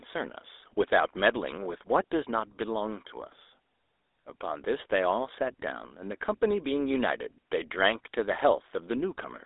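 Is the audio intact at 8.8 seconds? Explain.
No. At 8.8 seconds the speech is buzzy and gravelly, with a boxed-in, telephone-like narrowness and nothing above about 3.8 kHz. This is GSM full-rate codec damage, present throughout the clip rather than only at that moment. The codec rebuilds the voice from a vocal-tract model driven by coarse, regularly spaced pulses, which creates the rough buzz. The audio is confined to a 300 Hz to 3.7 kHz line band, and the sound fits a 13 kbit/s rate.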